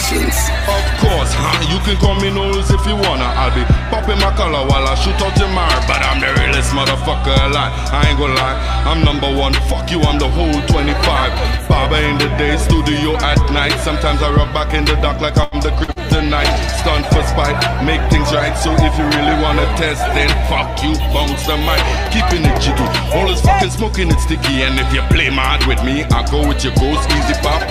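At 15.43 s a short stall from a late packet holds the sound for 85 ms, until 15.55 s. The jitter buffer ran dry and the last sound was stretched. Unlike a loss, nothing is skipped: playback resumes where it stopped, now 85 ms later.

Two short concealed packet losses follow, at 15.84 to 15.91 s and 15.92 to 15.99 s. Each loses 40 ms of real audio. The decoder extrapolates from the preceding sound and then blends back. This produces brief smears or wobbles, and the original material is genuinely gone rather than delayed.

From 16.08 to 21.33 s a call bitrate drop takes the encoder from 128 to 28 kbps, and it stays at the low rate for about 5.2 s. Coarser coding and a lost top end make the sound muffled and watery. This is a sustained change in quality, not a momentary glitch like the events before it.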